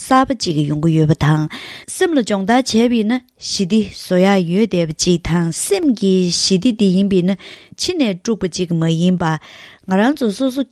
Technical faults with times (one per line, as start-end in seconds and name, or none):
none